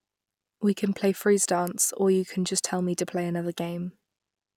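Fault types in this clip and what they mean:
Nothing's wrong with this speech clip, so there's no fault to list.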